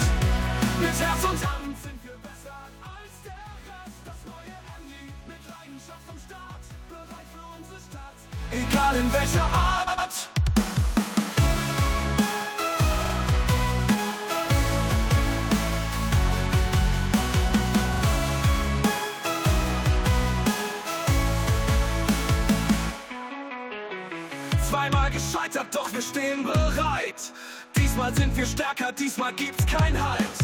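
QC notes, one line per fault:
9.86–10.08 s, 13.04–13.13 s, 17.93–18.01 s: repeated frames. A short block of compressed audio is played three times in a row, so the sound stutters. At the first event the block is 106.7 ms long and adds 213 ms, which fits about five frames being resent. At the later two the block is 42.7 ms and adds 85 ms each, which suggests two frames.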